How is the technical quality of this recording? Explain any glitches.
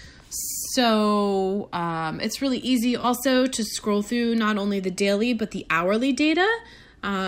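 The recording has one brief glitch, an AAC frame loss with concealment, from 3.01 to 3.05 s. About 21 ms of coded audio went missing, which fits a single dropped AAC frame. The decoder patched the gap by reusing the last good spectrum with randomised phase, so the moment sounds like a quick smeared, noisy, phasey blur. On a spectrogram it shows as a thin vertical strip where fine detail turns diffuse; the waveform stays continuous there, with no true dropout to silence.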